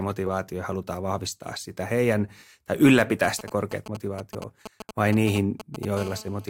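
GSM signalling bursts from 3.24 to 5.85 s: a nearby 2G phone's short radio bursts are rectified by the audio circuit, giving galloping ticks and brief 217 Hz buzzes roughly 10 dB under the speech. GSM phone buzz from 5.97 to 6.46 s: the phone now transmits continuously at 217 bursts per second, producing a hard, raspy harmonic buzz about 17 dB below the speech.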